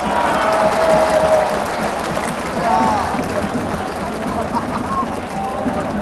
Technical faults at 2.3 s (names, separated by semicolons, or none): skip ahead